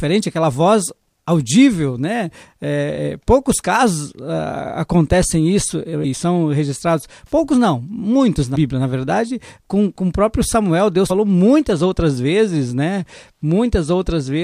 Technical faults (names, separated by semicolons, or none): compressed frames skipped